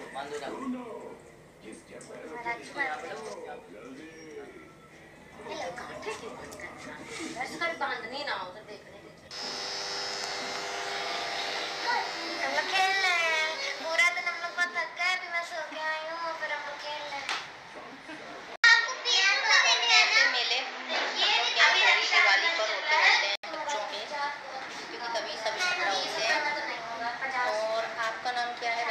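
At 18.56 s there's an 80 ms gap, then the sound goes dull and boxy until 23.44 s: nothing above 7.6 kHz, the level shifts by a few dB, and a new noise floor appears. That points to the input likely switching to a poorer device.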